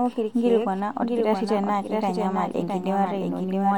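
Throughout the speech, a doubled audio track runs: a second full-band copy trails the original by roughly 0.7 s, somewhat quieter, with no decay or room colouring. It likely comes from a second, slower capture path or an out-of-step edit, and it sounds like a dry, distinct repeat.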